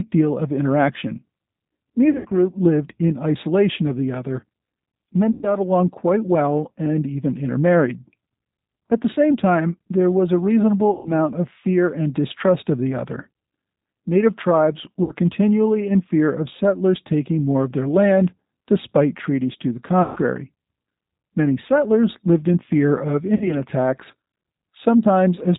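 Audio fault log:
Throughout: G.729 codec at 8 kbit/s, speech rebuilt from a vocal tract filter and sparse pulses, so nothing above 4 kHz survives and the speech sounds plainly rough and synthetic.
2.11–2.33 s (before "lived in isolation of"), 5.31–5.49 s, 10.93–11.14 s (between "time there was a" and "of fear and distrust"), 15.03–15.12 s, 20.02–20.20 s (after "despite treaties to the"), 23.35–23.54 s: VoIP packet loss concealed by the speech codec. About 60–140 ms of audio goes missing each time, and the decoder stretches its last pitch and filter into a fading buzzy tone or coloured noise. At 2.11 s the gaps are scattered over 200 ms, the longest 80 ms.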